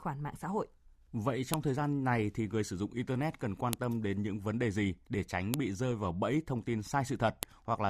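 At 1.54 s (just before "thời gian này thì"), 3.73 s (between "dụng internet cần quan" and "tâm đến những vấn"), 5.54 s (between "đề gì để tránh" and "bị rơi vào bẫy") and 7.43 s, a sharp snap cuts through the speech: a file header played as audio. Header bytes from joined WAV pieces were read as samples, so each click lands regardless of the speech. On a waveform it's a spike about 1 ms wide; a spectrogram shows a thin full-height vertical line.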